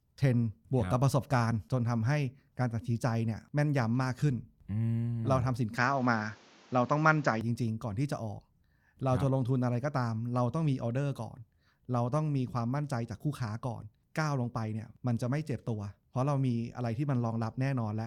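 At 5.78 s the speech turns duller and boxier, with nothing above 7.6 kHz. A faint new background noise appears, well below the speech. Loudness stays about the same, with no gap. This is likely an input switched to a poorer device. Full clarity returns at 7.41 s.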